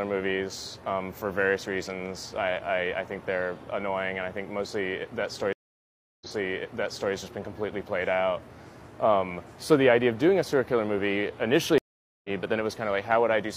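At 5.53 s a stream reconnect occurs. The connection broke, the player went silent for 0.68 s, then started a new decoder partway through the stream. Playback resumes 0.93 s earlier than where it stopped, so a stretch is heard twice, entering muted or faded in. A second stream reconnect at 11.78 s brings 0.46 s of silence, then a jump roughly half a second ahead. Unlike a plain dropout, the audio never continues from where it broke off.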